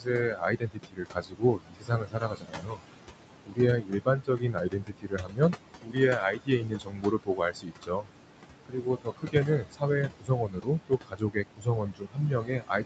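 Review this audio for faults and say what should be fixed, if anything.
The background pumps throughout, dropping between phrases and rising under them. These are noise suppressor artifacts: frame-by-frame band gating cuts the room noise by about 21 dB.

Speech endings and soft consonants sound swallowed at 0.0–2.84 s, 3.46–3.60 s, 3.77–5.57 s, 5.82–8.12 s and 8.66 s to the end. This is speech cut by the noise suppressor, which drops speech by up to about 22 dB when it mistakes it for noise.

Because the room noise sits only about 10 dB below the speech, lowering the suppression strength or using a less aggressive suppressor setting would prevent both faults.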